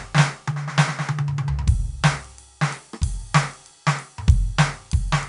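From start to finish the music carries a gritty hiss that rises and falls with its loudness, roughening sharp attacks, while everything above 10.6 kHz is missing, leaving a dulled top end. This is 4-bit ADPCM compression. Each sample is coded as a small step from a prediction, and the adapting step size cannot follow fast changes. The cutoff suggests a sample rate near 22 kHz, which fits a stream of roughly 88 kbps.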